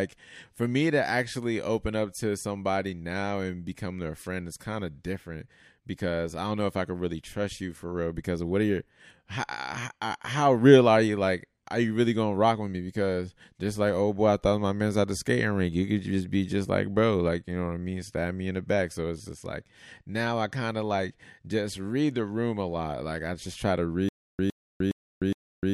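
From 24.09 s to the end, the stream likely stalled and replayed its last fragment at each retry, giving a stutter with silent gaps after "I just try to": a 111 ms burst repeats four times, every 413 ms, separated by about 302 ms of digital silence.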